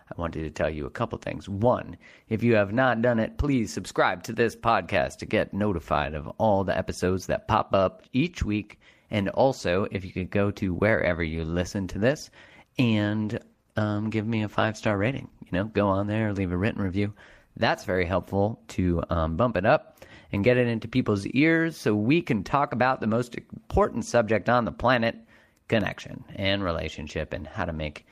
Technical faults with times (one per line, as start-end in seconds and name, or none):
13.06-16.85 call bitrate drop
25.81-25.84 loud pop